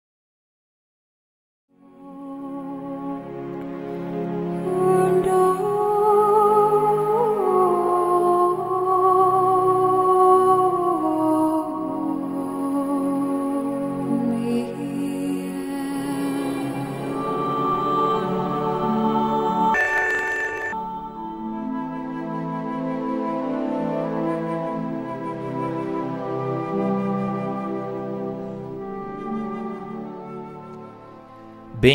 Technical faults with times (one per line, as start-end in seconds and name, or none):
19.74-20.74 planar audio read as interleaved